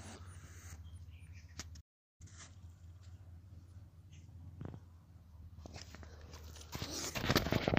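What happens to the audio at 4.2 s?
At 4.2 s the audio is inside a catch-up at higher speed, running from 2.21 to 5.21 s. After a stall, the backlog is resampled at 1.1 times normal speed, so tempo and pitch rise together, about a semitone and a half, before returning to normal. A plain pitch error would leave the timing unchanged.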